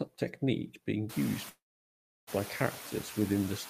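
All the way through, you can hear noise suppressor artifacts working on this speech. The suppressor pulls the steady background down by about 10 dB frame by frame, so the noise dips in the pauses and creeps back up under the talking. The room noise jumps by about 24 dB around the one-second mark. That room noise is real background, not a fault, sitting about 17 dB below the speech.

From 1.49 to 2.29 s there's a call audio freeze. It's most likely packets stalling in transit until the jitter buffer ran dry. The last bit of sound gets stretched into a short fading buzz or hiss, then there's roughly 0.67 s of dead silence before things pick up exactly where they stopped. Nothing is lost. A gap of about 0.78 s has been inserted, and everything after it runs that much late.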